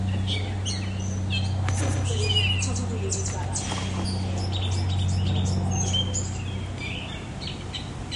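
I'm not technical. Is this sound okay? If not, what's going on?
No. From 1.88 to 3.66 s there's a doubled audio track. A quieter copy trails about 150 ms behind, likely from the sound being recorded twice.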